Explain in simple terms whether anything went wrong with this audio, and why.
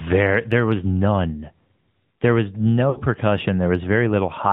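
The whole clip sounds muffled, thin and buzzy, like a phone call. That is the AMR narrowband mobile codec, which cuts everything above 4 kHz.

From 2.90 to 3.01 s, the sound smears, fades, then returns rough. These are lost AMR speech frames. The decoder filled the gap by stretching earlier sound.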